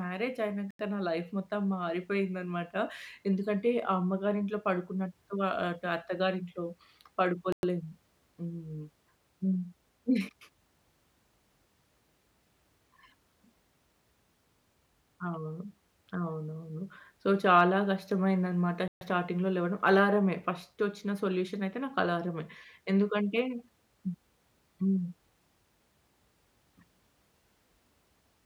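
Speech drops to complete silence three times: at 0.71 s for 88 ms, at 7.52 s for 107 ms, and at 18.88 s for 133 ms. Each gap is likely a Bluetooth stall, where interference delayed packets until the headphones' buffer emptied and playback waited for the resends. On a waveform each appears as a flat line between abrupt edges. A spectrogram shows a clean vertical blank band across all frequencies.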